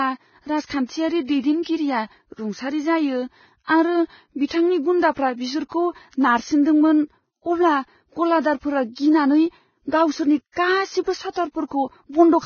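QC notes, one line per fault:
Throughout, Vorbis compression: the encoder likely ran at a very low bitrate, around 16 kbps. It removed everything above 6.6 kHz and quantised the remaining treble so coarsely that detail became grainy hiss, leaving the speech dull and gritty with smeared consonant onsets.
0.66–0.70 s, 4.46–4.50 s (just before "गुन्दाफ्रा बिसोरखौ नारसिनदोंमोन"), 10.52–10.56 s, pre-echo: the codec spread the noise from each sharp onset across its whole transform block. This puts a short hiss in the quiet gap before the attack, lasting 38, 43 and 46 ms respectively, and softens the onset itself.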